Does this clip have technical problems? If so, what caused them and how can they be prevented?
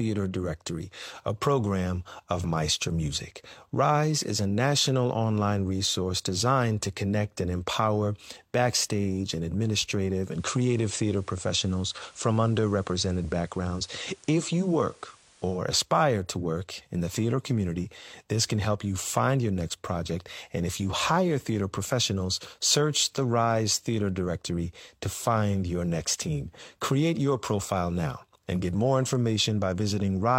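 Yes. From 10.25 s to 15.64 s the audio shows digital radio blending to analogue: the receiver lost the digital stream and cross-faded, over about 145 ms, to the station's FM broadcast, returning to digital just before "aspire to work in". During the FM stretch, hiss sits roughly 30 dB below the signal, and the level shifts by about 1 dB. Better antenna placement or a stronger-signal location would keep the receiver on digital.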